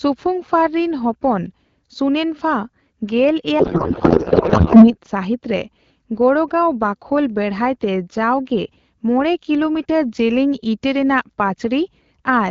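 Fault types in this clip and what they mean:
codec payload misread: from 3.59 to 4.95 s, octet-aligned AMR frames are read as bandwidth-efficient, so every field lands in the wrong place and the speech turns to garbled warble and noise barely tracking it, ending before "ᱥᱟᱦᱤᱛᱨᱮ ᱜᱚᱲᱜᱟᱣ ᱵᱟᱠᱷᱳᱞ". Unlike a dropout, sound continues, just scrambled.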